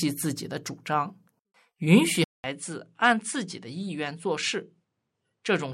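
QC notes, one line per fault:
2.24 s to the end, input switched to a poorer device: after a 200 ms gap at the switch, the speech comes back about 5 dB quieter and duller, with a new, faint noise floor roughly 50 dB under it, most likely because recording moved to a narrower-band microphone. On a spectrogram the energy is cut flat at 10.5 kHz from 2.24 s onward, with a blank column at the gap; the waveform shows a short flatline, then smaller peaks.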